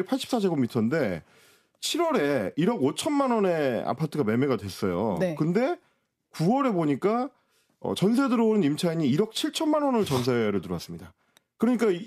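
A speech recording in which no technical fault can be heard anywhere in the signal.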